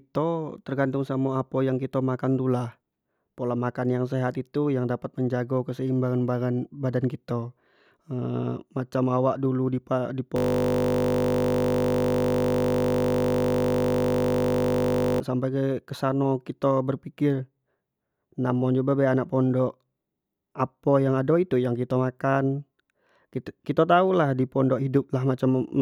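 From 10.36 to 15.2 s the system froze and replayed one 20 ms buffer, a system hang loop heard as a steady 50 Hz buzz.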